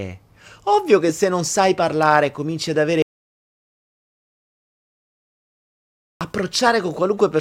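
At 3.02 s the speech cuts off abruptly into an audio dropout to silence lasting about 3.19 s, until the signal returns at 6.21 s. The gap is silent rather than quiet room tone, so the background disappears along with the speech and nothing from that stretch survives. The likely cause is a lost input, such as a disconnected device, a broken link or an accidental mute, while the recorder kept writing empty samples.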